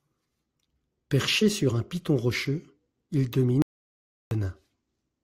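At 3.62 s, right after "un piton rocheux il", the speech cuts out abruptly into an audio dropout to silence lasting until 4.31 s. The 0.69 s gap is silent with no room tone, likely from the input being lost while recording continued.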